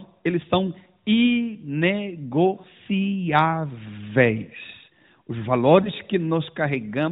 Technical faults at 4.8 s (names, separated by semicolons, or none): none